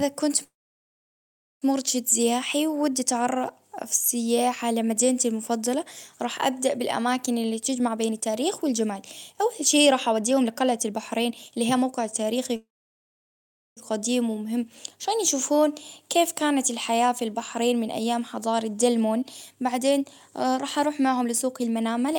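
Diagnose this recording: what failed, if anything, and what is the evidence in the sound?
Call audio freeze at 0.43 to 1.65 s, before "مرشد سياحي ودي", and at 12.56 to 13.80 s. This is a network and jitter-buffer stage fault. Each stall lasts about 1.2 s, with a short fading fill and then about 1.1 s of silence. The speech resumes where it stopped and nothing is lost. The likely cause is delayed packets emptying the buffer, which adds about 1.2 s of delay each time.

Jitter buffer speed-up, also at the buffer stage. It occurs at 7.69 to 9.37 s (121%), after "راح أبدأ بالأماكن اللي" and before "أول شي", at 9.87 to 12.52 s (119%), and at 17.02 to 22.16 s (117%), after "عشان يشوفون كيف كانت". The speech sounds hurried at unchanged pitch because the receiver trims pitch-period slices to cut the built-up delay. It removes roughly 0.4 s in the first stretch, about half a second in the second and about a second in the last.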